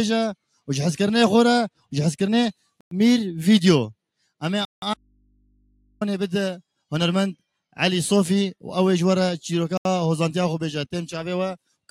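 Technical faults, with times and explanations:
2.81 s, 4.65 s and 9.78 s, Bluetooth stall: the sound drops to dead silence three times, for about 106 ms, 172 ms and 78 ms, then carries on from where it stopped. That pattern likely comes from radio interference holding back packets. The headphones' buffer runs empty, playback simply halts, and it resumes once the resent data lands.
4.94 to 6.01 s, audio dropout to a faint residue: just after the second stall, the wanted signal vanishes abruptly for a bit over a second, about 1.07 s, and snaps back just as suddenly. The gap isn't silent. A low mains hum sits there at roughly 40 dB below the normal level, which likely means the source was lost while everything downstream stayed live and picked up hum from an open input. The hard edges at both ends are what separate this from a natural pause or a fade.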